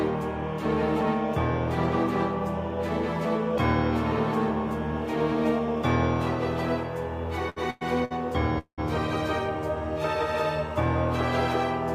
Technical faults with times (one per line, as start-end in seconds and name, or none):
7.49-7.58 short stall from a late packet
7.70-7.83 call audio freeze
8.05-8.12 short stall from a late packet
8.58-8.80 call audio freeze